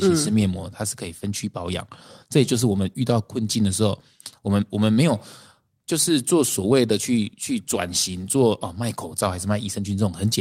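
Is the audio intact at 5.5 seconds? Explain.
No. At 5.5 seconds the speech carries small timing edits from repeated timing corrections, which run from 0.09 to 10.25 s as the receiver keeps trimming short pieces to keep pace at 104 percent speed. Underneath is clock drift between sender and receiver: the sender's clock runs about 4 percent fast, so the jitter buffer keeps overfilling.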